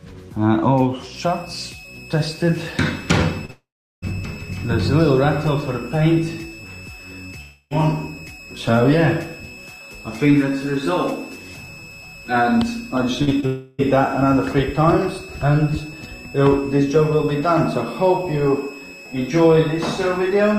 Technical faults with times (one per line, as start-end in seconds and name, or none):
1.16-20.58 switching supply whistle
3.45-3.50 short concealed packet loss
3.50-4.13 long network dropout
7.41-7.73 long network dropout
13.23-13.29 burst of packet loss
13.29-13.44 short concealed packet loss
13.46-13.80 long network dropout